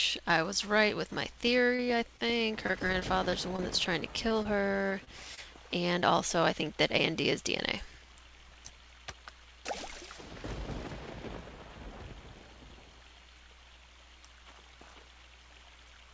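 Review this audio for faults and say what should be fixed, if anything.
Two stretches of repeated packet loss give the audio a choppy, robotic edge, from 1.64 to 3.60 s and again from 4.28 to 5.39 s. Packets kept going missing, and each hole was patched by stretching the last bit of sound, so you hear short smeared blips in quick succession. The gaps are short, the longest about 32 ms in the first stretch and 26 ms in the second, but together they cover roughly a tenth of each span. The band tops out at 8 kHz, which fits a G.722 call path. To prevent this, fix the network path or give the jitter buffer more headroom so late packets still arrive in time.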